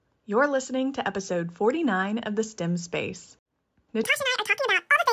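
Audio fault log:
4.04–5.12 s, wrong sample rate: the last stretch of speech suddenly runs at double speed and jumps a full octave, 12 semitones, because the samples are going out twice as fast as they came in, which fits 16 kHz audio played at 32 kHz.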